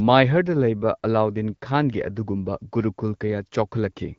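No technical faults can be heard anywhere in the speech. It carries the character of AMR wideband (HD Voice) coding at 12.65 kbit/s, with only light coding colouration and the top of the band filled in by shaped noise.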